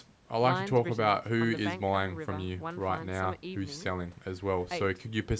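No technical faults are audible.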